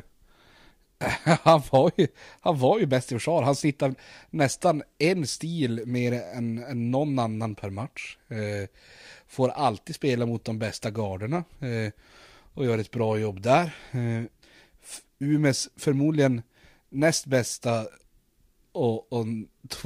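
From 4.89 to 5.40 s, four CD scratch ticks recur at a steady spacing, about six per second, each around a millisecond at most. A blemish defeats error correction once per disc revolution, and that regular rhythm separates them from random digital clicks.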